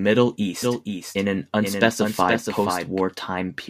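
From 0.63 to 3.01 s there's a doubled audio track: a dry copy about 5 dB quieter trails about half a second behind, likely from a slower second capture path.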